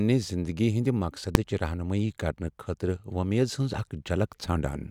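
At 1.35 s the speech is hit by a single sharp bang, far louder than anything around it and over almost instantly. This is invalid numbers at full scale. A calculation produced infinite or invalid values, which were pinned to the largest value the output can hold. That block sat flat at one extreme value for only about 1.45 ms, which fits a 64-sample processing block. Because the block is so short, the pops at its start and end merge into one loud click instead of two separate pops with silence between.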